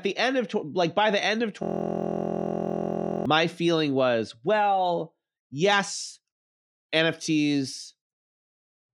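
The computer froze while the hardware kept replaying one 23.2 ms buffer, a system hang loop heard as a 43.1 Hz buzz from 1.63 to 3.26 s.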